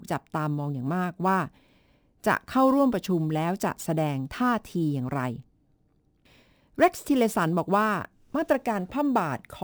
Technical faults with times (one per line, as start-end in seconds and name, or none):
0.00-9.64 imaging from sample-and-hold upsampling